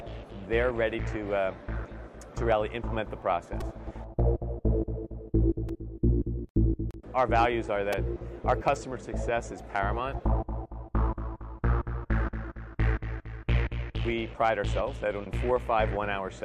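Repeated buffer faults occur at 3.61, 5.69 and 7.93 s. Fresh audio arrived late, so a piece about 2.67 ms long replayed four, two and three extra times. This fits a 128-sample buffer. Each event sounds like a brief buzzy click.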